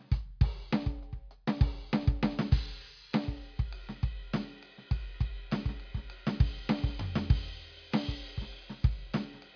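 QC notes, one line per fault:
The music signal holds steady and continuous, with its level, timing and frequency balance showing nothing that points to a problem in the recording or playback chain.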